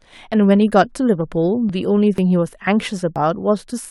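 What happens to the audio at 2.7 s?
At 2.67 s the speech skips forward. A sliver of sound, roughly 10 ms, drops out, and the audio on either side is butted together with no gap of silence. The result is a tiny jump in the flow rather than a pause. This is likely audio missing between chunks. The recording seems to be handled in 0.5 s blocks, and a short piece was lost while one block closed and the next one opened.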